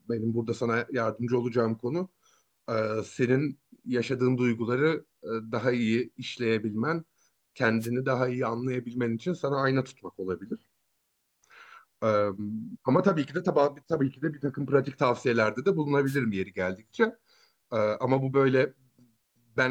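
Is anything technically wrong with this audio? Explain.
Yes. Two wireless microphone noise hits break into the speech, at 7.79–7.89 s and 16.06–16.17 s, each lasting only about 0.11–0.12 s. The analogue FM radio link faded as reflected signals cancelled, so receiver noise surged in a brief swish of static. Unlike a digital dropout, which cuts to silence or a hard gap, these are filled with hiss rather than emptiness.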